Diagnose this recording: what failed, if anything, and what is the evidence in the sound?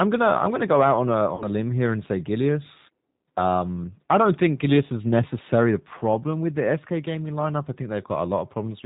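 The codec stage is at fault: it's G.729 at 8 kbit/s. Nothing above 4 kHz gets through, and the speech sounds plainly rough and synthetic throughout.

The network dropped packets from 1.35 to 1.45 s. About 50 ms went missing, which fits five 10 ms frames. G.729 concealed the gap by extrapolating from the last pitch and filter, stretching the sound into a fading buzzy tone or coloured noise.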